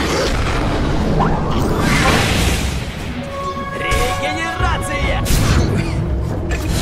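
From 3.24 to 4.28 s there's a GSM phone buzz: a steady, raspy 217 Hz drone, about 32 dB below the audio, from a nearby handset on a call.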